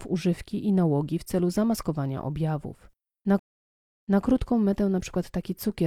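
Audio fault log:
3.39–4.22 s stream reconnect: the speech drops into 0.59 s of dead silence as the connection breaks, then a fresh decoder restarts about 0.23 s earlier in the stream, repeating a fragment. The waveform shows a flat gap, then a soft fade-in; the spectrogram shows a blank vertical band.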